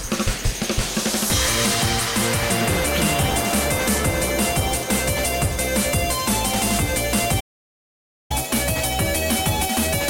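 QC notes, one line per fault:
7.40–8.31 s, playback stall: sound halts mid-flow for 0.90 s, likely the player starving or blocking; flat-line gap in the waveform, empty column on the spectrogram.
8.31–10.09 s, catch-up at higher speed: the backlog is resampled to 1.1x, raising pitch about a semitone and a half; spectrogram harmonics shift upward, waveform events squeezed closer.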